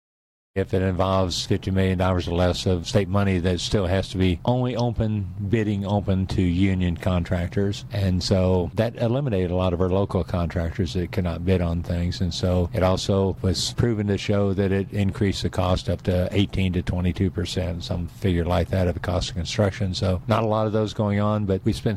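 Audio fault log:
Nothing to log here; no fault turned up anywhere in the clip.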